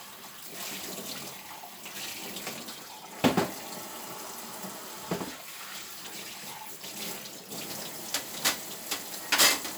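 No technical faults can be heard anywhere in this recording of sound. At no point does the audio falter, drop or change in a way that would point to a problem in how it was captured or delivered.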